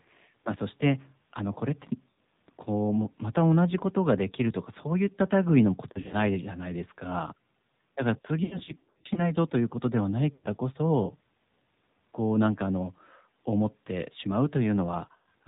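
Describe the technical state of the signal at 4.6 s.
At 4.6 s the speech is passing through the AMR narrowband mobile codec, as it does for the whole clip. The signal has been squeezed to an 8 kHz sample rate and rebuilt from a vocal-tract model excited by a few pulses per 5 ms subframe. Nothing above 4 kHz survives, so the voice sounds band-limited and telephone-like. The damage is plainly audible: a buzzy, synthetic quality that fits a low mode around 7.4 kbps.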